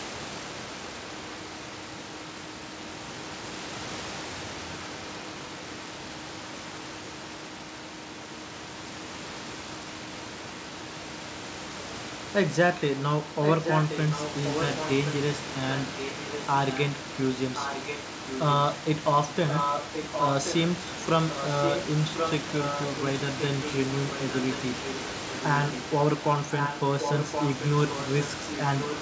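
Speech recorded over a call path limited to 8 kHz carries an echo leak: a delayed copy of the talker, trailing by about 1.07 s, runs from 0.0 to 3.4 s and from 4.26 to 8.82 s at roughly 20 dB below the direct speech, then from 9.61 to 20.86 s and from 21.28 s to the end at only about 5 dB below. The likely cause is a far-end loudspeaker whose echo canceller failed to remove the returning signal.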